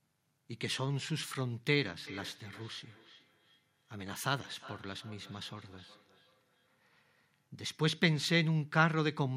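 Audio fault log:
2.07–7.48 s, feedback echo between two devices: a second device in the same room is on the call and plays back what this microphone sent, and this microphone picks that playback up and sends it again. The local echo canceller only removes its own device's output, so the returning copy passes straight through. Each stretch of speech comes back roughly every 0.4 s, at about 22 dB below the direct speech at its loudest.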